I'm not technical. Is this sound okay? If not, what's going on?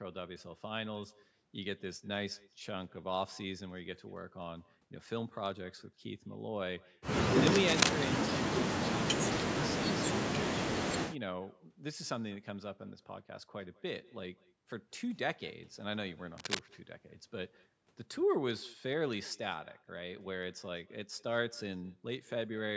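No. There is echo with no canceller throughout. Every bit of speech returns about a fifth of a second later as a faint, thin copy, because the far end's loudspeaker leaks back into their microphone.

There is also cable scratch noise, a rough scratching burst from 7.40 to 7.93 s, louder than the speech, and again from 16.38 to 16.59 s at about speech level. It is likely a worn cable or connector being moved.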